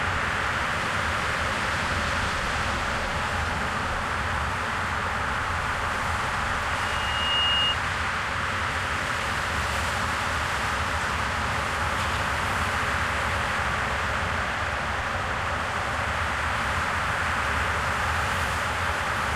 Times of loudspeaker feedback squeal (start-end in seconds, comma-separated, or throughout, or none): 6.70-7.79